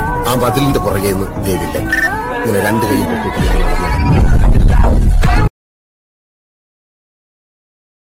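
From 0 to 3.05 s, pre-emphasis is left on: a treble boost matching the FM 50 µs curve was never undone by its de-emphasis cut, so content near 10 kHz sits about 11 dB above 1 kHz. The sound is thin, bright and hissy. A spectrogram shows an unusually dense, bright upper band.

At 5.48 s an audio dropout to silence begins and lasts to the end. The sound stops abruptly, with no room tone or noise floor remaining. The likely cause is a lost input while recording continued. The waveform is a flat line, and the spectrogram is fully dark.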